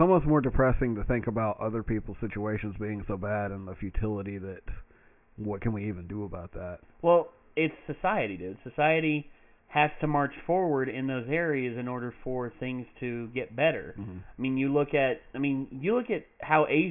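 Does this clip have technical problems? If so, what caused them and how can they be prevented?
No, nothing in this clip points to a technical fault, so there is no cause to trace and nothing to prevent.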